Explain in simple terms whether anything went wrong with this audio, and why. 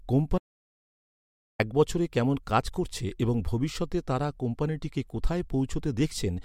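At 0.38 s the speech cuts out completely and returns at 1.59 s, just before "এক বছরে কেমন কাজ". This is an audio dropout to silence: about 1.2 s of silence with no room tone, likely from the input briefly disconnecting or muting. The speech in that gap is lost.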